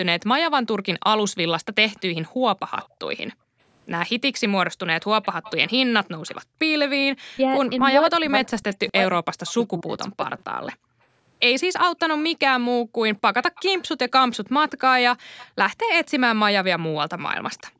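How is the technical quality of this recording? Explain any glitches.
The recording has clear echo-canceller problems on a speakerphone call, with the audio band stopping at 8 kHz as the call's microphone processing shapes it.

Echo leak, 1.97–9.64 s and 13.55–17.62 s: a faint copy of the far talker arrives 245 ms late, about 20 dB and then about 25 dB below the speech. It is likely residue that the echo canceller missed in the loudspeaker-side microphone and sent back.

Background gated by the echo canceller, 2.29–6.59 s and 10.76 s to the end: while the loudspeaker played, the canceller clamped the microphone, so the room sound dips by up to about 40 dB, roughly 0.7 s and 1.5 s in total, then returns.

Speech suppressed in double talk, 7.33–10.41 s: with both sides talking, the speech dips or breaks up for around 2 s in total, sometimes falling around 40 dB. The likely cause is that the canceller could not separate this talker from the loudspeaker echo and attenuated both.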